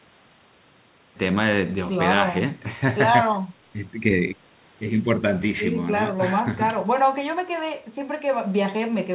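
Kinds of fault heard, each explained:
Nothing stood out on listening to this speech recording, which comes through a G.711 mu-law call path at 64 kbps with no content above 4 kHz.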